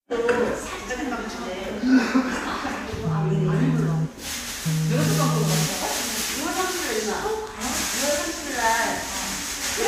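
No technical faults are audible.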